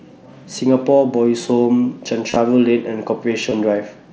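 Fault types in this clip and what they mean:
Concealed Bluetooth headset packet loss: missing headset packets were filled by repeating the best-matching recent waveform, so gaps sound like a short buzzy held tone rather than silence. Near 2.30 s about 45 ms is patched within 60 ms; a 15 ms patch follows near 3.50 s.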